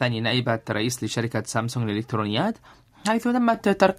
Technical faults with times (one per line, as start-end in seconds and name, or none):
3.54 microphone volume stepped up